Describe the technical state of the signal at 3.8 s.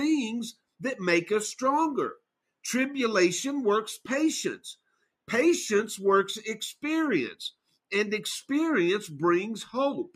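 Nothing goes wrong with the signal at 3.8 s; the audio is intact at that point.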